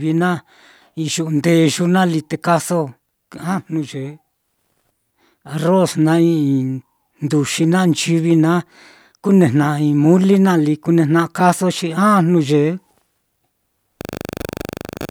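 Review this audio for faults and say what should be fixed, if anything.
No faults turn up anywhere in the clip, so there is nothing to fix. No change to the capture or processing chain is needed for this recording.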